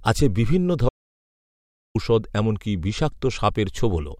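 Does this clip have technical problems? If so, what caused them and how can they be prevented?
Yes. An audio dropout to silence runs from 0.89 to 1.95 s, right after "আছে বিভিন্ন". The speech stops mid-flow and the gap is silent with no room tone. About 1.06 s of speech is simply missing. The likely cause is a brief loss of the input signal, from a loose connection, a failed link or a momentary mute, while the recorder kept writing silence. Secure the cables and links, and monitor the input level while recording.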